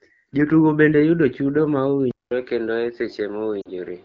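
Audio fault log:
2.11 s onward, input switched to a poorer device: the input likely changed to another microphone or headset profile. About 200 ms of silence marks the switch, then nothing reaches above 5.3 kHz, so the sound turns duller, with faint new noise roughly 35 dB down.
3.61 to 3.70 s, lost AMR speech frames: radio errors corrupted about 40 ms of coded speech, which fits two frames. The decoder repeated the last good settings at falling gain, so the sound briefly drops to near silence before recovering.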